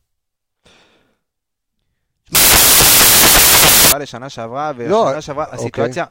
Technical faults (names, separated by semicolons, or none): samples built from the wrong bytes